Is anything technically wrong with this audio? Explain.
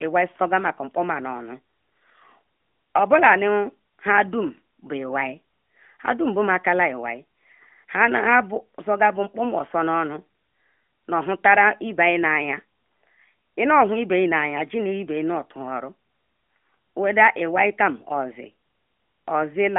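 No, there is nothing technically wrong with this speech. It carries the narrow sound of an AMR narrowband mobile codec path, with nothing above about 3.5 kHz, a band that fits a 200 Hz to 3.4 kHz phone line, and only light coding texture, which points to the 12.2 kbps mode.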